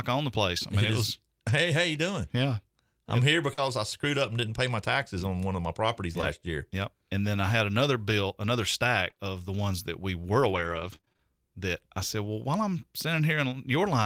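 At 1.47 to 1.49 s there's a lost packet rebuilt from error correction. A single 20 ms packet went missing, but the next one carried a low-bitrate copy of it, so the decoder played that copy instead of leaving a hole. You don't hear a gap, just a moment where the speech turns a bit rougher and grainier before it snaps back to full quality.

Right after "I'm here", from 3.53 to 3.59 s, there's a short concealed packet loss. About 40 ms never arrived in time, so the receiver stretched the last bit of sound to cover the hole and then blended back into the real audio. It comes across as a small smear or wobble just before "I screwed up and". The last 20 ms of that stretch, 3.57 to 3.59 s, was rebuilt from error correction, so the end of the dropout sounds rough and coarse rather than smeared.

After "one of my properties" the same pairing shows up again, from 6.21 to 6.24 s. The first 11 ms is a concealed packet loss, where the receiver extended the previous sound. 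The following 20 ms, 6.22 to 6.24 s, was rebuilt from error correction. It's brief enough to register as a tiny hiccup with a grainy tail.

From 9.10 to 12.27 s, starting after "had another bill another" and running up to "while I'm", you get scattered short gaps. Roughly seven gaps, from packets lost or arriving late one at a time, none longer than about 30 ms, and around 5% of that span was patched by continuing the last sound. Another 300 ms or so was rebuilt from error-correction copies. The result is a run of little ticks and smears, with patches of rougher texture.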